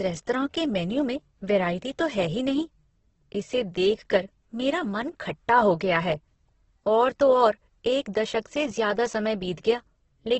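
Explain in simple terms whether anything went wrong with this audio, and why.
Something did go wrong: throughout the speech, tones sound noisy, rough and grainy, and nothing is heard above about 8.2 kHz. This is likely heavy Opus compression. Unlike MP3 damage, it has less swirling and fewer watery gaps, because Opus fills missing detail with noise.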